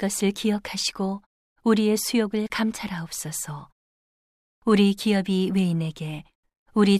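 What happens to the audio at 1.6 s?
Nothing goes wrong at 1.6 s; the speech runs on intact there, with no dropout, glitch or distortion.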